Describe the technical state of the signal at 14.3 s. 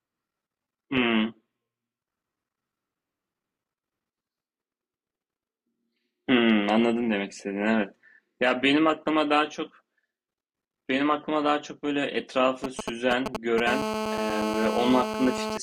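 At 14.3 s the speech sits under GSM phone buzz, running from 13.67 to 15.58 s: a nearby 2G handset on a call pulses at 217 Hz, the circuitry rectifies it, giving a steady, raspy, harmonic-rich buzz about 4 dB below the speech, harsher than smoother mains hum.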